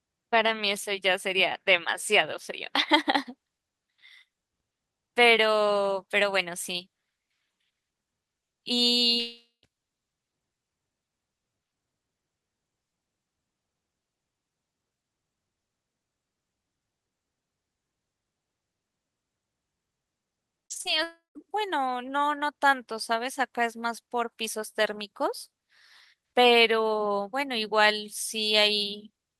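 At 9.19 s the speech stops and a fading buzz carries the last sound on before roughly 150 ms of silence, with the speech returning at 9.65 s minus about 0.44 s of material. This is a long network dropout, most likely a stall in which no packets arrived and concealment ran out. It differs from scattered loss because there is one continuous hole that decays to silence, not a string of short patches.

From 20.65 to 20.87 s the speech turns choppy. This is repeated packet loss (robotic sound). Four short gaps, the longest 50 ms, are each papered over by repeating the preceding sound, so about 55% of that span is synthetic fill. The closely spaced small holes give the robotic texture, with no drop into silence.

A second long network dropout follows at 21.03 to 21.48 s. About 0.32 s is lost, and again the filler fades to roughly 150 ms of silence before the speech resumes.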